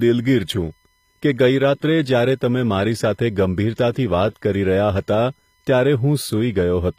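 A USB whine runs through the whole speech clip: a steady tone at 1 kHz, with its strongest component at the 2 kHz harmonic, sitting roughly 45 dB below the speech. The bus draws current in regular 1 ms frames, and that periodic load leaks into the audio path through shared power or ground. The result is a fixed-pitch whine under the speech and in the gaps between phrases.

Also present from start to finish is plainly audible codec damage in the upper spectrum, with nothing above 15.5 kHz. The treble sounds rebuilt rather than captured, and its harmonics do not line up with the band below. This is likely HE-AAC compression, specifically the v2 profile at a low bitrate around 24 kbps. That codec codes only the lower band and fills the treble by copying lower bands upward under a coarse envelope, so s sounds come out gritty or metallic.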